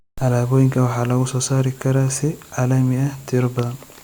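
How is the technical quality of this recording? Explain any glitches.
Nothing stood out on listening to this speech recording, so there are no glitches to explain.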